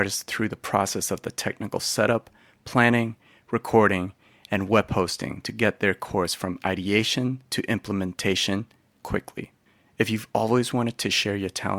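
Speech with no technical faults.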